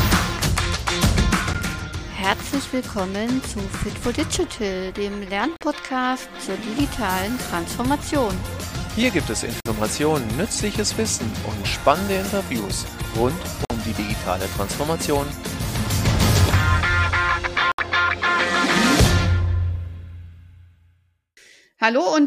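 The audio has a gap between stream segments, heard as hard-edged silent holes at 1.53 s and at 5.56–5.61, 9.60–9.66, 13.65–13.70 and 17.72–17.79 s, lasting from about 13 to 68 ms. They recur about every 4 s, where segment timestamps fail to meet. Nothing is lost; the sound simply resumes late.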